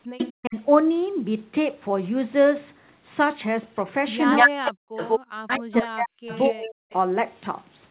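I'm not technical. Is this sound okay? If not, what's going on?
No. The clip has two call problems that overlap in places.

Speech suppressed in double talk, from 0.13 to 0.56 s and again from 4.44 to 6.75 s: the voice sinks almost to silence or drops out in pieces, for about a third of a second early on and about a second and a half later. This is likely the call's echo remover hearing both sides at once, failing to tell them apart, and turning everything down.

Echo leak, at 0.18 to 0.32 s, 3.75 to 3.83 s, 4.26 to 5.2 s and 5.53 to 6.93 s: a delayed copy of the voice is heard, about a quarter of a second late at first and about a fifth of a second late afterwards. It is barely audible at 3.75 s, clearly quieter than the voice at first, louder than the voice from 4.26 s, and somewhat quieter than the voice from 5.53 s. It likely comes from a loudspeaker at the other end whose echo remover let part of the sound back through.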